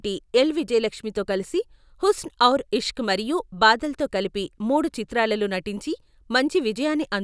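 No technical faults occur anywhere in the speech.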